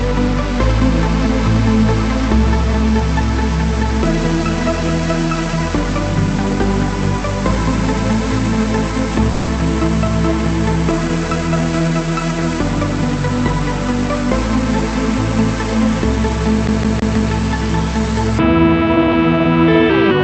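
At 9.31 s the sound breaks off for about 0.19 s, through 9.50 s, in what is most likely a long network dropout: a run of audio never reached the receiver. Instead of going silent, the gap is smeared over with a continuation of the last sound, a short buzzy tail that thins out across about 160 ms. When things pick back up, roughly 160 ms of the original audio is simply gone, so the material jumps forward rather than resuming where it left off.

From 16.67 to 17.32 s you get the classic CD stuck on one turn. The same slice of about 160 ms plays four times in a row, with a brief mute at each jump back, giving that quick, perfectly even stutter you'd know from a scratched disc. It's a skip back of one track at the same point on each rotation, and the loop length stays locked at 160 ms, which is why the rhythm sounds so mechanical. The call path's Opus-style coding, with the top end stopping around 8 kHz, sits under both events.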